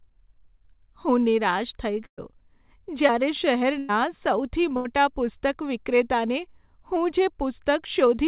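At 2.06 to 2.19 s a burst of packet loss drops about 120 ms of speech. The receiver stretches the last sound into a decaying buzz or hiss, then about 90 ms of near-silence follows before the speech resumes further on. A spectrogram shows a smeared, fading continuation, then an empty column. At 3.07 to 3.11 s a short concealed packet loss fills a 13 ms hole, with 20 ms missing, with a brief continuation of the preceding sound. It is heard as a quick smear or wobble, visible as a slight blur in the spectrogram. Two more bursts of packet loss follow, at 3.79 to 3.91 s (100 ms missing) and 4.77 to 4.87 s (80 ms missing). Both are bridged with stretched, decaying sound, the first with no silent gap. The waveform shows a repetitive, shrinking envelope in each, and the spectrogram shows a fading continuation that stops abruptly where real speech returns. Throughout, the G.711 call path leaves nothing above 4 kHz.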